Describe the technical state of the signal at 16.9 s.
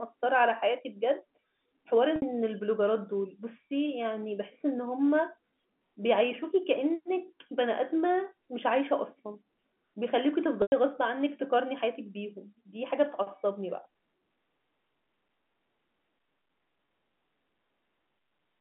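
At 16.86 to 16.88 s there is packet loss with pitch repetition: one 20 ms gap bridged by repeating the last pitch period, heard as a brief buzzy hold. A waveform shows identical repeated cycles, and a spectrogram shows frozen harmonics under the telephone band's 3.4 kHz ceiling.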